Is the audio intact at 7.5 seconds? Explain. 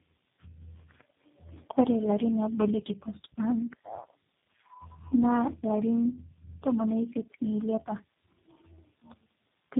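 No. At 7.5 seconds the speech carries tandem speech coding, which runs through the whole clip: four speech codecs in a row, each re-encoding the previous one's degraded output, leave it rough, muffled and warbly. A spectrogram shows smeared harmonics and nothing above 3.7 kHz.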